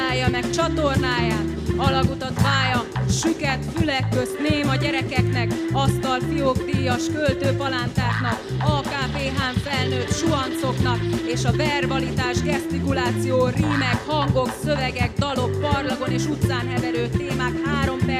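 Nothing is technically wrong with this clip.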